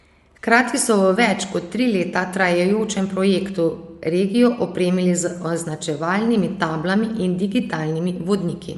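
From start to finish the speech sits under a hard ceiling, with nothing above about 11.5 kHz, and the upper range has a breathy, grainy grit instead of clean detail. That's likely Bluetooth LC3 compression: the transform codec throws away much of the top of the spectrum and patches it with shaped noise. The damage is plainly audible, which fits a fairly modest bitrate, around 48 kbps with 10 ms frames.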